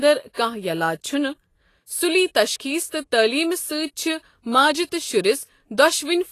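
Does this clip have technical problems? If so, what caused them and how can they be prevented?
Yes. Throughout, the speech is hissy and grainy, with nothing above 14.2 kHz: likely Vorbis compression at a low bitrate near 32 kbps, quantising treble detail into noise. Encode at a higher bitrate or quality setting.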